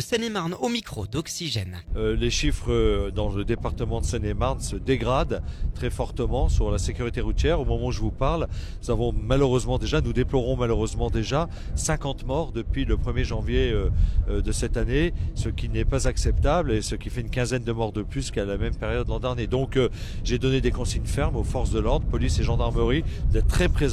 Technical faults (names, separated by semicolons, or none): none